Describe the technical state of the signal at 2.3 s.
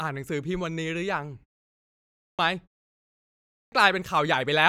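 Clipped start after a pause, 2.1 to 2.39 s: after a 0.73 s silence the output device was still waking, so about 287 ms of speech is lost. The sound bursts in abruptly without its onset, and the waveform jumps from flat straight to speech level with no rise.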